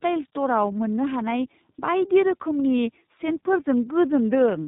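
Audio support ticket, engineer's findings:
Tandem speech coding throughout. Rough, muffled, warbly speech, nothing above 3.8 kHz. Sound points to two speech codecs in a row, likely AMR-NB then iLBC, iLBC re-coding AMR-NB's errors.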